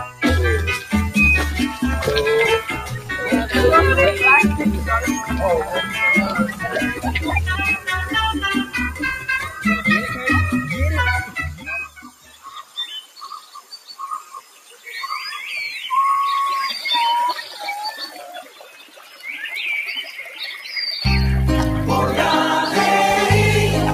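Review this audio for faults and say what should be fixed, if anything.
Noise suppressor applied to music or sounds, throughout: a speech-oriented noise suppressor stays active and treats steady tones, ambience and decays as noise. Gain swings by roughly 15 dB, so sustained material sinks while attacks pass, giving a pumping, thinned character.

Sound cut by the noise suppressor at 0.00–0.22 s, 2.76–3.12 s, 6.50–7.08 s, 8.64–9.64 s, 11.26–14.87 s, 18.09–19.25 s and 20.06–20.68 s: the suppressor pulls these passages down by about 6 to 13 dB. The longest dip runs over three seconds, and held sound and tails there drop away.

To prevent this, bypass the speech noise suppressor, or switch it to a music or original-sound mode, whenever the source is not speech.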